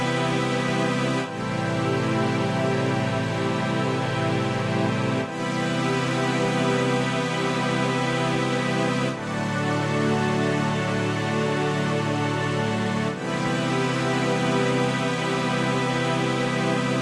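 No technical faults can be heard in the sound at any point in time.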